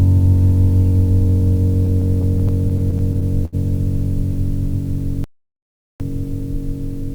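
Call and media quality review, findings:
Repeated stalls (stutter), 1.85–3.55 s: music halts briefly twelve times, longest hold 73 ms, about 0.19 s filled in total, nothing lost. Jitter buffer underruns from late or slow packet delivery; receiver extends the last sound across each wait.

Audio dropout to silence, 5.24–6.00 s: music cuts out for about 0.76 s into silence, no room tone, material in the gap lost. Likely the input path dropped (device, link or mute) while the recorder kept writing silence.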